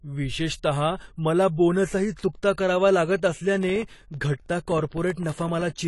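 Throughout the speech, nothing is present above 11.5 kHz, and what remains sounds dull and smeared with a fizzy, swirling texture. That points to AAC compression, likely AAC-LC at a low rate near 32 kbps. A plain low-pass filter would dull the sound without that swirl.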